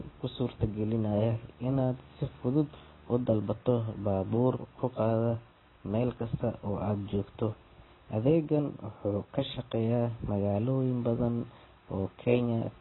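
Speech throughout shows likely AAC compression at a very low bitrate, around 16 kbps, so nothing survives above 4 kHz, leaving it dull, smeared and fizzy on sibilants.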